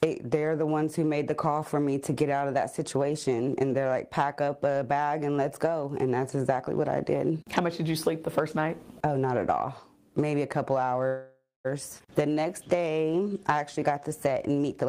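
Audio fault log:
11.07–11.67 s, call audio freeze: the sound halts and the last moment lingers as a fading buzz, dropping to about 180 ms of silence before resuming where it stopped. The likely cause is held-up packets draining the jitter buffer, inserting a roughly 0.57 s gap while losing nothing.
11.99–12.02 s, skip ahead: playback lurches forward with only a tiny 12 ms bridge, and roughly a fifth of a second of audio is simply gone. Audio was dropped while later packets already waited, so the two sides of the jump are joined almost directly.
12.22–14.54 s, jitter buffer slow-down: the audio drags at about 90% speed with unchanged pitch, sounds stretching out. The receiver repeated single pitch periods and pause fragments again and again, adding 236 ms to rebuild a reserve in a low buffer.
14.82–14.87 s, jitter buffer speed-up: a brief hurried spurt runs at about 178% speed, pitch intact, as a few tens of milliseconds are cut out. 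The buffer held more than its target, so the receiver trimmed short pitch-period pieces in quick succession to shed delay.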